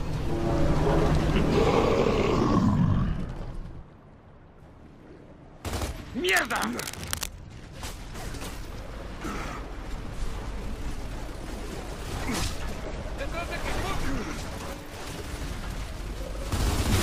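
The audio carries one fault: a patch of cable scratch noise from 6.28 to 7.31 s, about a second of dense, uneven scratching and rustling that sits roughly 10 dB below the wanted sound. It is likely caused by a worn cable, connector or control being moved, its contact resistance fluctuating rapidly. What sets it apart from digital clicks or dropouts is its texture: a continuous, irregular burst rather than isolated sharp ticks or gaps.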